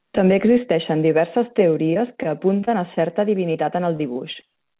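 From 1.9 to 2.98 s, just after "existeixen diverses", the sound turns choppy and robotic. This is repeated packet loss: a run of short holes, the longest about 27 ms, each patched by extending the preceding sound, so roughly 13% of that stretch is synthetic fill.

At 3.52 to 3.56 s there is a brief smear. This is short concealed packet loss: about 20 ms never arrived in time, and the receiver bridged the hole by continuing the last sound before blending back into the real audio.

From 3.96 to 4.69 s the same robotic choppiness returns as repeated packet loss. Five holes, none longer than about 26 ms, leave about 14% of the span concealed. All of this passes through a narrowband call path with nothing above 4 kHz, which points to G.711 A-law at 64 kbps.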